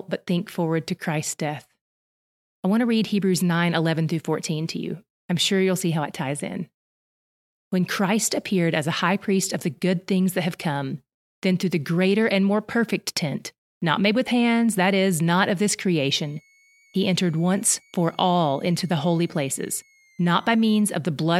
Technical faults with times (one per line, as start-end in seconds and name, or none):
16.00-20.82 switching supply whistle